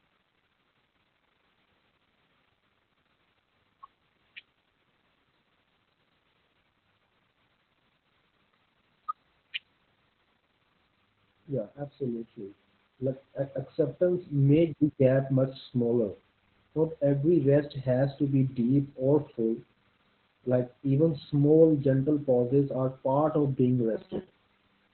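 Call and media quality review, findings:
Opus voice compression, entire clip: speech muffled, hoarse, slightly robotic. Spectrogram shows a hard ceiling with nothing above 4.2 kHz. Fits narrowband SILK-only coding at 8 kbps. Coarse excitation coding roughens the voicing and smears the harmonics in blocks, consistent with 20 ms frames.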